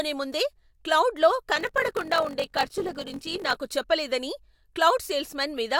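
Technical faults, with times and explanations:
1.54–3.56 s: block size mismatch (padded). One stage hands over blocks shorter than the next stage reads, which fits a 1024-sample read block, and each shortfall is filled with silence. The speech picks up a rough buzz at 46.9 Hz and drags at 0.861 times normal speed while keeping roughly its usual pitch. A spectrogram shows regular vertical gaps with harmonics stacked at 46.9 Hz spacing. The waveform shows near-silent stretches repeating every block.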